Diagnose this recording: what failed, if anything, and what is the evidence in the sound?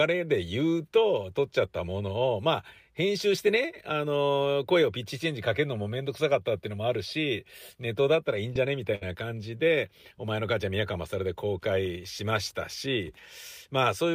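The network path failed, with short concealed packet loss from 8.53 to 8.57 s. Roughly 20 ms never arrived, and the decoder extended the preceding sound to cover it, giving a brief smear. On a spectrogram the preceding sound runs on unnaturally before blending back.

A burst of packet loss from 8.95 to 9.03 s removes about 60 ms. The receiver continued the last sound while fading it, so a held buzz or hiss dies away and then the audio resumes further along. The waveform envelope tapers across the gap, and the spectrogram shows the preceding sound stretched and decaying.

There are two lost packets rebuilt from error correction, each 20 ms, at 8.55 to 8.57 s and 9.01 to 9.03 s, closing both loss events. These frames came from low-bitrate redundant copies, so they sound rougher and noisier. On a spectrogram they appear as short, grainier patches.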